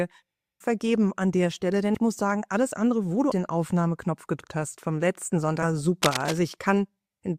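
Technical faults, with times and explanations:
1.94–1.98 s, 4.40–4.44 s and 5.62–5.65 s, compressed frames skipped: the audio jumps ahead by roughly 70 ms, then 150 ms twice, which points to whole 10 ms frames being lost or rejected.
6.03–6.38 s, cable scratch noise: a dense, uneven rustle sits only slightly below the sound for about a third of a second, likely from a worn connector or control being moved. On a spectrogram it shows as ragged broadband speckle; the waveform gains jagged spiky bursts.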